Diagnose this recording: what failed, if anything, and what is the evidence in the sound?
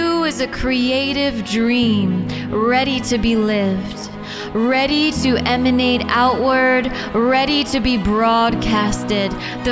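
Nothing failed; no faults heard.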